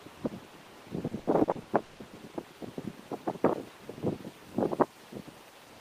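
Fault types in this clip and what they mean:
Repeated packet loss (robotic sound): from 1.07 to 2.02 s, six short holes open one after another in the stream. Each is bridged by stretching the last stretch of sound forward, so about 400 ms of the span is patched-in repetition, about 42% of it, with the longest hole at 160 ms. Because the patches arrive in quick succession, the sound turns choppy, with pieces missing.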